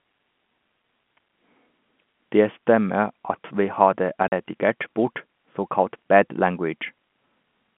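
A speech recording carried over a G.711 telephone path, band-limited to roughly 150 Hz to 3.4 kHz, shows packet loss filled with silence from 4.28 to 4.32 s. For 40 ms the audio drops to nothing, which fits two consecutive 20 ms packets going missing, with an abrupt cut-out and restart. On the waveform this is a flat silent gap with vertical edges. A spectrogram shows a blank column.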